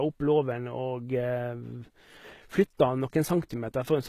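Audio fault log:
throughout HE-AAC compression: speech treble is rebuilt from copied lower bands, likely a low-bitrate HE-AAC encode, so s sounds turn gritty and metallic, with nothing above 14.9 kHz.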